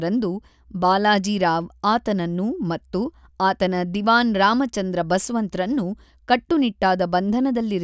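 No technical faults occur anywhere in the audio, so there is nothing to describe in time order.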